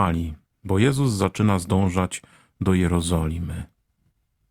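No technical faults can be heard anywhere in this speech.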